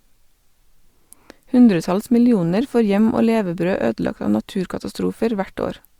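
Speech recording with no technical faults detected anywhere in the clip.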